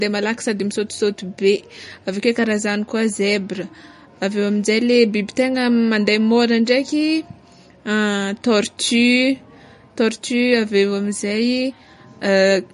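Right through the speech there's plainly audible codec damage, likely MP3 compression at a low rate, something like 40 kbps. Nothing comes through above 10.6 kHz, and the weak detail flickers in and out between frames, giving that watery, swirly sound with smeared attacks.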